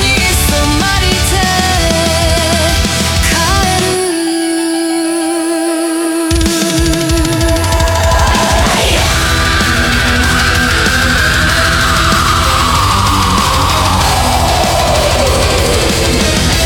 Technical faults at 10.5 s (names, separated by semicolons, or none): none